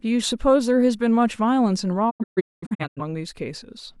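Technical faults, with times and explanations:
2.09–3.01 s, digital broadcast dropout: the speech mutes in several short holes totalling about 0.6 s across 0.85 s, the longest 0.21 s, each with 20 ms fades as failed frames are discarded. Unlike analogue fading, the gaps are clean silence, without hiss.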